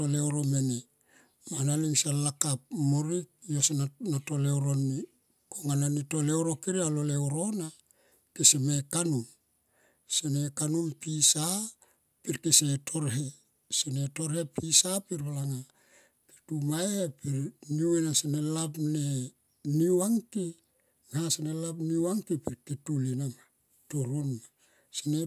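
No technical faults are audible anywhere in this speech recording. The audio runs continuously, with no event that needs a time marked against it.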